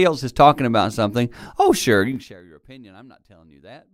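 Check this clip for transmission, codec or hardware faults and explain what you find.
One fault turns up in this speech clip: zipper noise. From 2.08 to 2.4 s, between "about something oh sure" and "your opinion", the gain drops roughly 25 dB in unsmoothed 3 dB steps, around 30 a second. Each jump clicks, so the fade ticks and zips.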